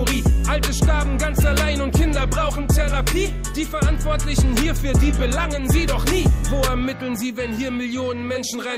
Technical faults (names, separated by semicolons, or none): none